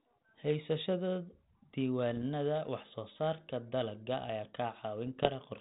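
Bit errors on an ADPCM link strike from 2.11 to 2.23 s, just before "wax soo saarka dalagga", and again from 5.07 to 5.37 s. A low scatter of flipped bits, only a small fraction of a percent, corrupts the difference codes. Each bad code also knocks the decoder's adaptive step size and predictor off track, so the damage rings on briefly. The result is pops and rough, gritty bursts with momentary level jumps over the band-limited, lightly coloured sound of a 32 kbit/s G.726 link.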